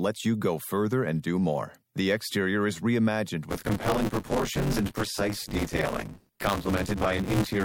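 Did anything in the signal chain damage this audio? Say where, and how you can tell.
Yes, buffer tearing at the driver or buffer stage, from 3.49 s (just after "exterior is reimagined") to the end. A 100 Hz robotic buzz rides the speech because roughly half of each 10 ms period replays audio about 20 ms stale. The spectrogram shows vertical striations every 10 ms, and the waveform shows hard steps at each join.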